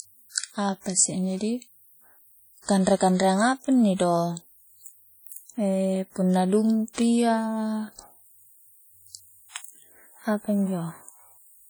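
Throughout the speech, the likely cause is low-bitrate audio saved at a high bitrate: a heavily compressed encode, consistent with 32 kbit/s WMA, was re-encoded as roughly 310 kbit/s MP3. The earlier coding artefacts remain unrepaired, with nothing above 20.1 kHz.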